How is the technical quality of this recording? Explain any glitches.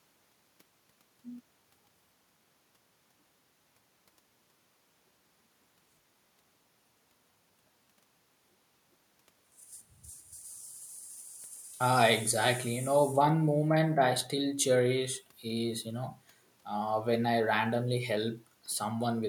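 No glitches or technical faults can be heard anywhere.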